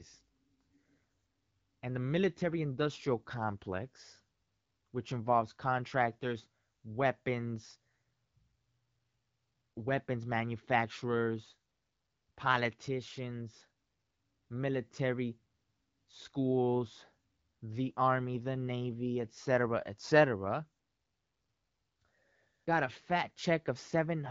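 The speech is carried through wideband AMR coding at a rate that keeps it clear, with its top end ending near 7 kHz as that codec does, and no technical faults can be heard anywhere in it.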